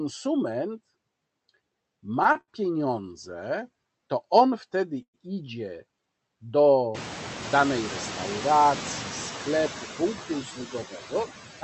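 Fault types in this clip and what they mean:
noise suppressor artifacts: a suppressor pulls down bands it judges steady noise, by about 14 dB here, so the background dips between phrases and swells under speech.
short stall from a late packet: packets arrived late and the jitter buffer ran dry, so near 2.32 s and 2.41 s the sound is held for 23 ms and 71 ms.
call audio freeze: at 5.02 s the jitter buffer emptied, likely from packets delayed in transit; the last sound is stretched and fades, with 80 ms of silence, before the audio resumes.
speech cut by the noise suppressor: between 10.18 s and 11.13 s the suppressor mistook parts of the speech for noise, turning them down by up to about 13 dB so they sound swallowed.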